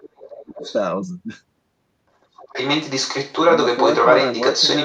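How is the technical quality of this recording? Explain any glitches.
The recording has two echo-handling problems: a second voice bleeds into the talker's speech, and early on the talker's own speech is pushed down.

Other side's voice leaking through: a faint second voice sits under the speech from 0.0 to 0.42 s, about 20 dB below it, and again from 0.64 to 0.75 s, about 15 dB below. From 2.21 s to the end it turns loud, roughly 5 dB above the talker. The likely cause is the far end playing over a loudspeaker, with the echo canceller leaving part of it in the microphone signal.

Speech suppressed in double talk: from 0.28 to 0.65 s the talker's speech dips sharply, falling by around 25 dB at its deepest, for a total of roughly 0.4 s. This likely happened because both sides spoke at once and the echo canceller, unable to tell the local talker from the loudspeaker echo, attenuated everything together.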